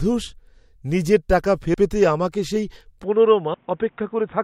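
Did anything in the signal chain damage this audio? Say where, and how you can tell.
Yes. Audio missing between chunks at 1.74 s and 3.54 s, a driver or buffer stage fault. The first falls between "নিজের টাকা" and "পেতে আমাকে সেই". At each point about a fifth of a second of speech vanishes and the two sides butt together with no silence, so the sound jumps forward. The skips are 1.8 s apart, consistent with 2 s chunks each losing that fifth of a second, most likely while the recorder closes one chunk and opens the next.

Input switched to a poorer device at 3.04 s, right after "পেতে আমাকে সেই", running to the end. This is a capture-stage change at the converter or device input. With no silent gap and no change in loudness, the speech abruptly loses everything above 3.7 kHz, turning dull and band-limited. A new background hiss appears, roughly 40 dB under the speech. The sudden bandwidth cut and changed noise floor point to the system likely swapping to a narrower microphone or headset call profile mid-recording.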